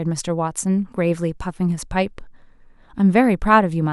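No technical faults can be heard at any point in the recording.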